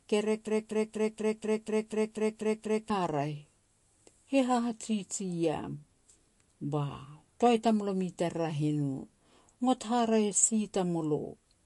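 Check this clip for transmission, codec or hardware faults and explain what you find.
Two faults are audible in this speech clip.

MP3 compression, throughout: the sound is watery and swirly with nothing above 11.3 kHz, likely from an encoder starved of bits, which fits a rate near 48 kbps.

Broken-record loop, 0.47 to 2.90 s: a 243 ms fragment repeats exactly ten times back to back, likely a stalled stream resending its last buffer, so the speech meant for that span is lost.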